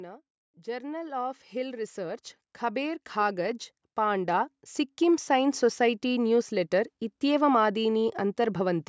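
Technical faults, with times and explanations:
0.54 to 6.8 s, automatic gain rising: the AGC decided the input was too quiet and kept pushing its gain up, about 17 dB in all, so the speech and the room noise behind it swell together slowly over those six-odd seconds, through the call's usual mic processing.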